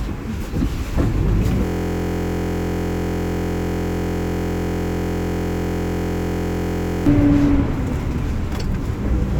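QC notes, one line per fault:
1.65–7.06 s, system hang loop: a 23.22 ms slice of sound repeats exactly, over 200 times. The system froze while the hardware kept replaying one ring buffer, which fits a 1024-sample buffer. Such a short loop becomes a steady buzz at 43.1 Hz.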